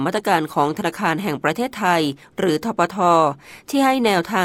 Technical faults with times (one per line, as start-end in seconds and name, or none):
none